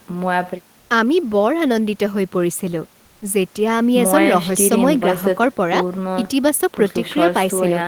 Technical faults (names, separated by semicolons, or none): comfort noise in place of the background